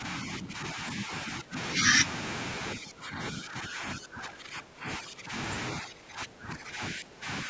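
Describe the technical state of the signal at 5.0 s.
At 5.0 s the speech is being suppressed in double talk, a dip running from 2.75 to 5.33 s. At its deepest the level sinks by roughly 15 dB. The likely cause is an echo canceller that could not tell its own talker from the loudspeaker echo and turned both down.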